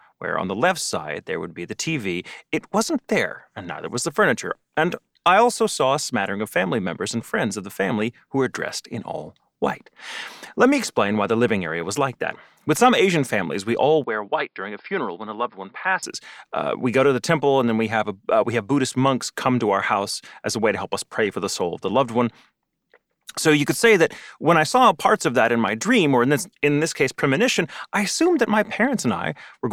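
It's a speech clip, and right after "families we all", from 14.04 to 16.03 s, the sound turns dull and boxy with nothing above 5.2 kHz, drops about 5 dB and picks up a faint new hiss, with no gap at the switch. That's likely the input switched to a poorer device.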